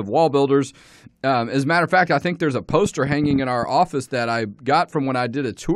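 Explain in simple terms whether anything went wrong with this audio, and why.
A quick run of ticking or popping sounds sits on top of the speech from about 2.70 to 3.64 seconds, starting right after "I think there's a" and ending just before "office that I". It is a train of clicks: around ten similar pops arriving unevenly, roughly twelve per second. The likely cause is something injecting short electrical pulses, such as interference from nearby equipment or a faulty connection or power supply.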